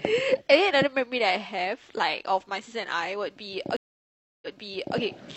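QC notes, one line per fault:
3.77 to 4.98 s, stream reconnect: the connection dropped, the player stalled and then reopened the stream, starting a new decoder partway through. That leaves 0.65 s of dead silence in the speech, and when sound returns it picks up 0.56 s earlier than where it cut off, because the server resent a short burst of audio already played. The listener hears a gap followed by a brief stretch of repeated speech.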